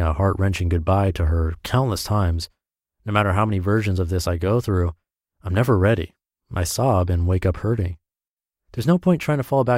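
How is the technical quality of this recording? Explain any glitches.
Nothing technical gets in the way here, since there isn't a single glitch to point to anywhere in this speech recording.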